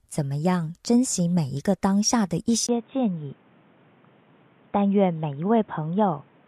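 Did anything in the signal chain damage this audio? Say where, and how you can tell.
Yes: at 2.67 s a 20 ms gap, then nothing above 3.8 kHz, level down about 5 dB and fresh background noise, likely an input switched to a poorer device, not a codec change.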